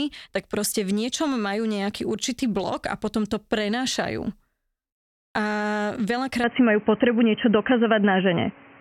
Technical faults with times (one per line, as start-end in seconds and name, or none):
6.44-8.81 input switched to a poorer device